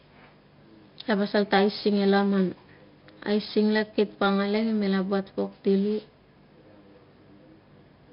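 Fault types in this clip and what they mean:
4-bit ADPCM compression: 4-bit prediction steps leave heavy level-following grit on speech, suggesting about 44 kbps; spectrogram shows noise between harmonics, empty above 5.3 kHz.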